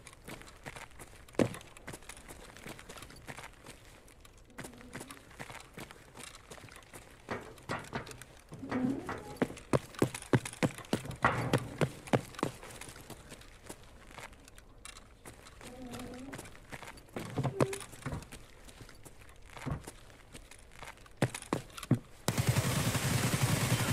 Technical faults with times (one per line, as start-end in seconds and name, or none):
none